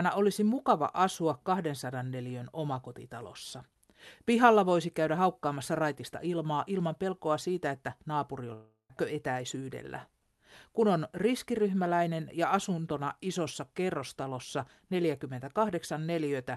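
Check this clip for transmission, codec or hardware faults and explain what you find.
One transmission fault stands out in this speech clip, heard through a call codec whose top end stops near 12 kHz. From 8.53 to 8.92 s, right after "pelkoa siitä että naapuri", the sound smears into a fading buzz for about 360 ms, drops briefly to silence, then resumes with a piece missing. This is likely a long network dropout: packets stopped arriving, and the receiver stretched the last audio to fill the gap before giving up.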